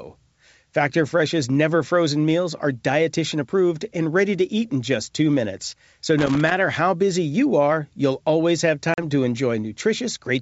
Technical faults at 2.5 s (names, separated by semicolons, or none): none